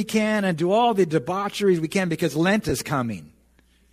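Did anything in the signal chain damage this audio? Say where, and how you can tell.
Yes: lost LE Audio frames on the Bluetooth link, 2.69 to 2.72 s. A 22.5 ms noisy smear, blurred on a spectrogram, fits three concealed 7.5 ms frames.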